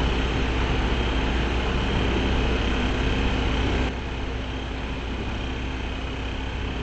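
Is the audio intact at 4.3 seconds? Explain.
No. A sudden gain jump starts at 3.89 s and runs to the end. Level and background drop about 6 dB at once, likely from an unramped gain change.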